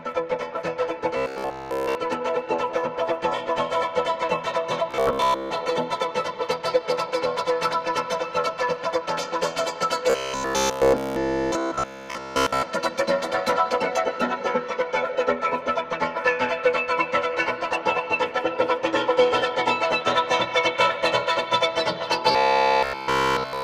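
Robotic sound from repeated short buffers at 1.17–1.95, 4.91–5.51, 10.10–12.63 and 22.32 s to the end: a rigid metallic buzz at 66.8 Hz, likely from one roughly 15 ms buffer looping while new audio is skipped, almost entirely in most events, about two-thirds in the second.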